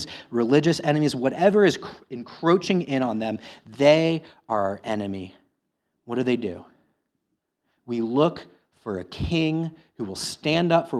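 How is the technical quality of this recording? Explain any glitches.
No glitches are audible anywhere in the recording, and the signal stays continuous and steady throughout.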